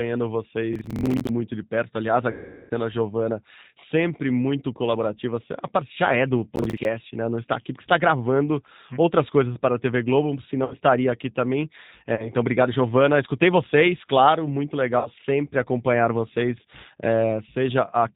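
Throughout the 18 s of speech, the G.729 codec (G.729A at 8 kbit/s) is plainly audible: nothing above 4 kHz survives, and the voice is rebuilt from a filter, a pitch predictor and a few pulses per frame. The result sounds rough and synthetic, unlike simple lowpass muffling.

From 0.73 to 1.29 s, processor overload crackle tears across the sound. Dozens of audio deadlines were missed in a row, and each miss replayed a short piece of old audio with hard edges, which fits buffers of roughly 10 ms. This gives a gritty, rapid crackle rather than a smooth fade.

From 2.31 to 2.71 s comes VoIP packet loss concealed by the speech codec. About 390 ms of audio was lost, and the decoder extrapolated from its last pitch and filter, stretching the sound into a fading synthetic fill that stays weak as packets resume.

At 6.56 to 6.85 s a second, shorter burst of overload crackle repeats the same stuttering replay of stale audio. 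Its fast, grainy texture marks it as a scheduling failure rather than a network one.

Further concealed packet losses occur at 10.65 to 10.75 s (about 60 ms lost), 12.16 to 12.31 s (about 30 ms) and 14.99 to 15.09 s (about 60 ms). Each produces a brief stretched, fading fill and a weakened recovery rather than a crackle.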